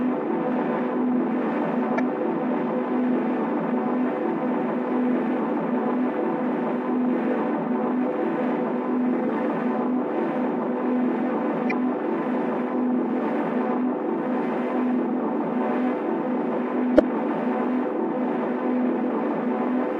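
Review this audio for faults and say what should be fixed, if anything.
Damaged data in a compressed stream: parts of the compressed file or stream were lost, zeroed, overwritten or mixed with other data. The decoder misread or rejected the affected frames and had to search for the next valid frame header before carrying on. Each spot is a brief fault lasting about 40 ms, at 1.96–2.00 s, 9.25–9.29 s, 11.68–11.72 s and 16.96–17.00 s, plus a shorter one at 6.11 s.

To prevent this, check the file against a checksum after every transfer and replace any copy that fails with one decoded from an intact source.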